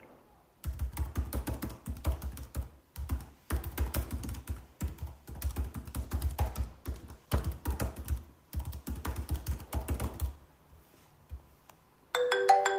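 From 6.0 s to 7.49 s a call bitrate drop sets in: the sound turns coarse and watery, with the top end dulled, which fits the encoder being squeezed from about 32 to 18 kbps. Unlike packet loss, nothing drops out; detail simply thins, then returns.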